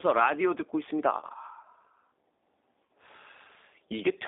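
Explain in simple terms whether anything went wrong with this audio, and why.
Throughout, the speech sounds thin, slightly rough and robotic. That comes from the G.729 codec, which rebuilds speech cheaply and cuts everything above roughly 3.7 kHz.

At 1.21 to 1.25 s and at 2.85 s, the speech briefly turns weak. This is VoIP packet loss concealed by the speech codec, which guessed at short missing chunks of about 20 and 40 ms.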